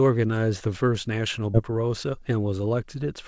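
At 1.54 to 1.56 s the speech lurches forward with no silence at the join: roughly 0.7 s of material is simply gone. This is a skip ahead, where a stretch of audio was dropped, in transit or by an overfull jitter buffer, while later audio was already queued, so playback jumped straight to it.

From 1.68 to 2.84 s the speech sounds hurried but keeps its pitch, running at 110% speed. This is a jitter buffer speed-up: holding more audio than its target, the receiver repeatedly trimmed out short pitch-period slices, around a tenth of a second in total, to reduce delay. Throughout, the G.722 call path at 64 kbps leaves nothing above 8 kHz.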